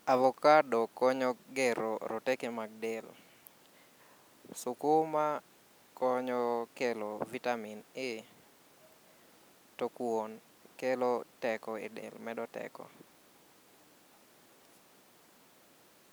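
No technical faults can be heard anywhere in this recording.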